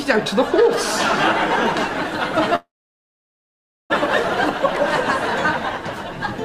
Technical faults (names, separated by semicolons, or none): call audio freeze